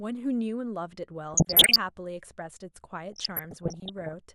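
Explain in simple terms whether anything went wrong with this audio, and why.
DAB burbling at 1.34–1.78 s and 3.13–4.14 s: weak digital radio reception let data errors slip through, adding short blips of noise to the speech.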